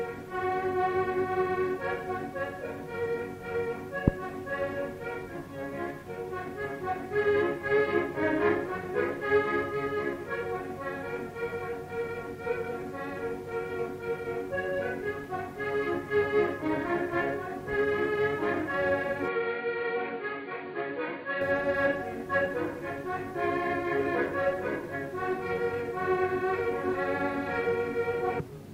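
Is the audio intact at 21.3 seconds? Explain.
No. From 19.28 to 21.41 s the sound turns dull and boxy, nothing above 4.7 kHz, about 5 dB quieter, with a new noise floor roughly 30 dB down. That points to a likely input switched to a poorer device, not a simple filter, because level and background noise change too.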